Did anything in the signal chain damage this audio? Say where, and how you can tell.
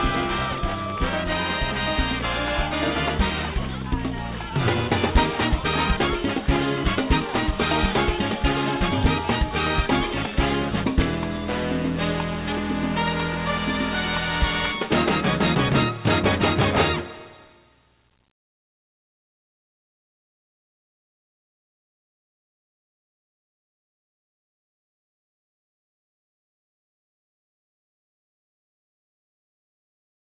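No, no damage detected.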